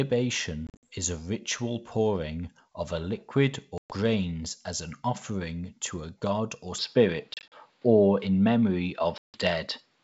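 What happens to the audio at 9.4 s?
Packet loss on an ADPCM call runs from 9.18 to 9.42 s: about 160 ms of audio, around fifteen packets' worth, drops out to a hard-edged silence. When sound returns, the decoder's adaptive predictor and step size no longer match the sender's, so the audio comes back slightly distorted and takes some tens of milliseconds to settle.

At 9.4 s the audio is also still in the duller stretch that began at 6.78 s with no gap, likely from the input switched to a poorer device. Nothing passes above 5.5 kHz, the level shifts by about 5 dB, and a faint new background noise sits well below the sound.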